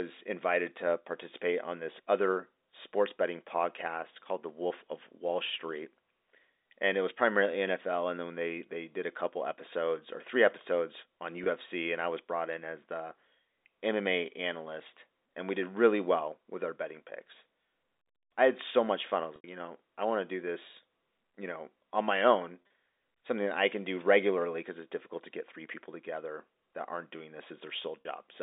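Speech over a G.711 telephone line, band-limited to roughly 250 Hz to 3.7 kHz, suffers packet loss with pitch repetition: the receiver filled each gap by repeating the last pitch period. The 20 ms loss at 11.44–11.46 s and the 40 ms one at 28.01–28.05 s sound like a briefly held, buzzy tone. The 80 ms loss at 19.36–19.44 s fades toward silence before speech cross-fades back. At 22.62–22.74 s, 70 ms of scattered losses over 120 ms, the longest run 30 ms, sound like short held, buzzy notes.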